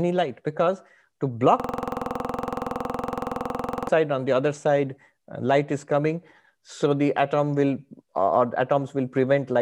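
From 1.60 s to 3.89 s, right after "because to" and before "on the other side", the speech gives way to a system hang loop. The machine or driver stalled while the audio hardware kept replaying its ring buffer, so one 46.4 ms slice, which fits a 2048-sample buffer, repeats identically roughly fifty times. It cycles at 21.5 Hz, 21.5 times a second. Unlike an underrun, there are no gaps of silence, only the same fragment repeating exactly.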